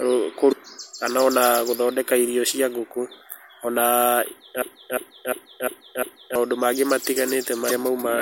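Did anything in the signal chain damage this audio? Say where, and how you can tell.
Yes, at the codec stage there's damaged data in a compressed stream. From 0.49 to 0.53 s and again from 7.67 to 7.71 s you get a quick glitch in the audio. The decoder hit corrupted frames, lost sync, and hunted for the next frame header.

At the playback or streaming stage there's a broken-record loop. From 4.62 to 6.36 s, the same 0.35 s fragment repeats exactly five times, back to back. The player or stream likely stalled and kept resending the last chunk it held, so the speech that belonged there is lost.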